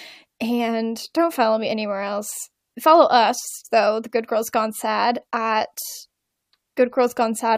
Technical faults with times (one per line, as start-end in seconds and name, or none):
none